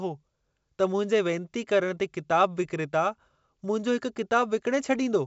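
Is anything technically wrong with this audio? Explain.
No, nothing technically wrong stands out here.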